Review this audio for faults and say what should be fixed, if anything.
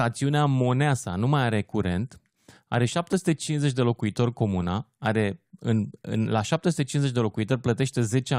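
Nothing stood out on listening to this speech recording, so there is nothing here that calls for a fix.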